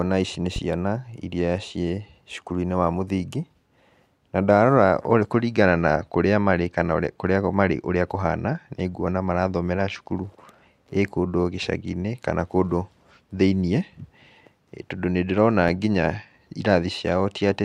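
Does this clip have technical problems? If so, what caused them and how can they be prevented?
Yes. A loud pop occurs at 0.56 to 0.60 s, right after "ici nĩ", and again at 15.68 to 15.72 s. Each is a single sharp pulse of roughly 5 dB above the speech, which continues underneath. The cause is likely a sudden voltage step from a plug, switch, static discharge or driver glitch, which the following circuitry shapes into a brief thump. Securing connectors, avoiding switching during recording and grounding equipment against static would prevent it.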